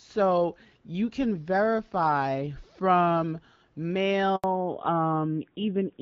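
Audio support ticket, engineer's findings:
Handover gap, 4.36 to 4.44 s: speech cuts out for 80 ms, decaying within a few tens of milliseconds, then dead silence until audio resumes. Probable component: network handover. No speech frames delivered during the switch, so that stretch is lost.

Fallback to narrowband, 4.44 s to end: nothing above 4 kHz from here, speech duller and rougher than the fairly clean HD Voice before it, which sounds like AMR-WB around 12.65 kbit/s. Consistent with a drop to an AMR-NB-type codec near 7.4 kbit/s.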